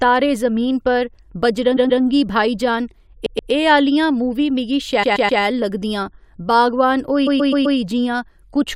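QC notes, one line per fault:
1.76–7.77 s, repeated frames: four stutters in the speech at 1.76–2.01 s, 3.25–3.51 s, 5.02–5.41 s (after "मूवी मिगी", before "लगदियां बागवान") and 7.26–7.77 s (after "लगदियां बागवान"). Each time a 128 ms block is replayed two, two, three and four times, adding 256, 256, 384 and 512 ms. The decoder plays the same stretch of compressed audio again, so the sound jumps back.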